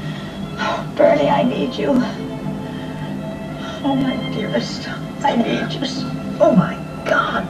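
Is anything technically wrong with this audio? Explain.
Yes, there are overlapping chunks at 0.94–0.96, 1.96–1.99, 2.99–3.01, 4.01–4.04, 5.04–5.06, 6.06–6.09 and 7.09–7.11 s. Each 1 s chunk starts before the last ends, so about 25 ms replays, giving a regular stutter.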